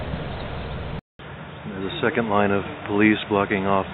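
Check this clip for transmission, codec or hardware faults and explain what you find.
One fault, from 0.99 s to the end. After a 200 ms silence at 0.99 s, the sound turns dull and boxy: nothing survives above 3.8 kHz, the level falls by about 5 dB, and a faint new background hiss appears, around 50 dB below the signal. This is likely an input switched to a poorer device. The system dropped its first source and reopened on a narrower-band microphone or headset call profile, with its own tone, gain and noise.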